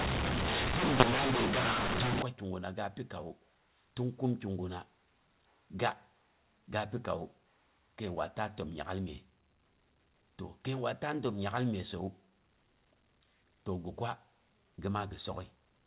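From 0 to 2.22 s, A-law telephone audio is decoded as mu-law, a mu-law and A-law mix-up: scrambled levels make the speech harsh and distorted, with noise filling pauses.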